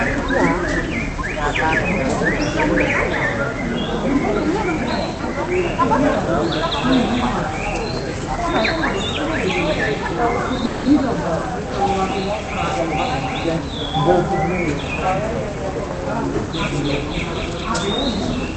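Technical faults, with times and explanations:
10.65 to 10.87 s, call audio freeze: the sound smears into a fading buzz for about 200 ms, then carries on intact but later, likely a jitter buffer running dry.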